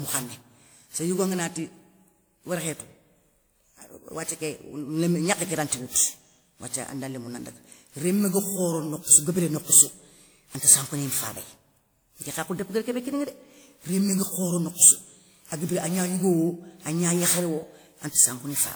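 From start to finish the speech carries a swirly, hollow smear, with consonant attacks blurred and a watery texture that a single encode at 96 kbit/s would not produce. This is generation loss, likely from the audio being decoded and re-encoded around seven times, consistent with a WMA chain at 96 kbit/s. Each pass quantised on a shifted frame grid, so noise accumulated. Content still reaches about 20.1 kHz, which separates it from a low-bitrate or band-limited encode.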